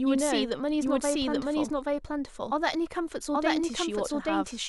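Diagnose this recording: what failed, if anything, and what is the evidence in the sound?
The doubled audio track runs the whole way through: every bit of speech comes back roughly 0.7 s later at about the same level, full-band and dry, with no decay or room colour. That's likely a second capture path or a bad edit layering a late copy.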